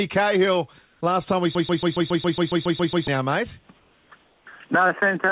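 From 0.83 to 1.01 s, the background between sounds is replaced by comfort noise: a steady, featureless hiss about 3 dB quieter than the real background, which sits about 39 dB below the loudest passages. The detail of the room sound disappears for those 180 ms. The likely cause is discontinuous transmission, where the sender's voice detector stops sending audio and the receiver fills the gap with synthetic noise, consistent with RFC 3389 comfort noise.

From 1.55 to 3.08 s, a broken-record loop takes over. A 138 ms fragment plays 11 times back to back, identical each time, giving a rapid stutter at roughly seven repeats per second. The audio that belonged in that stretch never arrives. This is likely a stall in the player, encoder or stream that kept resending the last fragment it held.

Comfort noise returns from 3.80 to 4.10 s and again from 4.25 to 4.46 s. Each time the background drops about 4 dB and turns flat and even before the real sound resumes. 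The band-limited G.711 call path, with nothing above 4 kHz, is audible throughout.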